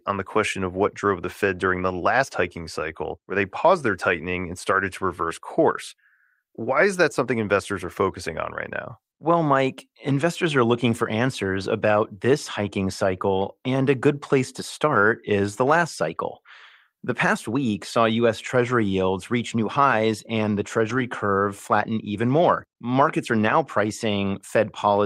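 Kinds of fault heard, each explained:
Lost packet rebuilt from error correction: Right after "new highs and the", around 20.89 to 20.99 s, about 60 ms of speech turns briefly rougher and noisier, which fits three lost packets being patched from the low-bitrate backup copies carried in later packets. There's no gap, and it's clean again by "curve flatten even more".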